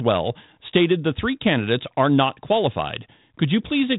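Listening through the speech, nothing stood out as a technical fault.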